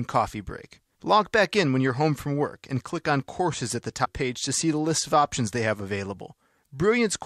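A speech recording with one fault: damaged data in a compressed stream at 4.01 to 4.07 s, between "on courses at the" and "page to see the". For about 60 ms the sound is disrupted. Corrupted bytes in the coded stream made the decoder misread the affected frames and lose sync. It searched for the next valid frame header, producing the disruption.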